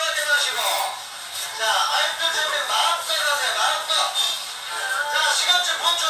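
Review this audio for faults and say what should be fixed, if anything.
Generation loss runs through the whole clip: the sound is swirly and hollow, with smeared transients and attacks that blur, and content reaches up to about 20 kHz. That full bandwidth is what separates it from a single low-bitrate encode, which would cut the top end and sound thin rather than smeared. The likely cause is around ten successive lossy passes, consistent with WMA at 128 kbit/s, each requantising on a shifted frame grid so noise and spectral gaps pile up. To prevent it, keep a lossless master and encode to a lossy format only once, at the final step.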